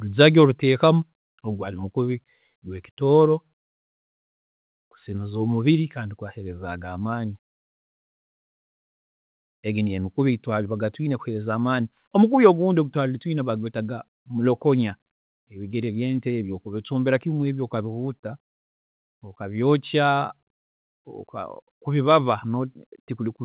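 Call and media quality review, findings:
Microphone volume stepped down, twice. Sudden drop in speech and background level at 1.02 s, about 3 dB, just before "ogu gwaari mukubi". Smaller drop at 3.27 s, about 1 dB. Likely auto gain control cutting mic input in single steps. Narrowband call path, nothing above 4 kHz, fits G.711 at 64 kbps.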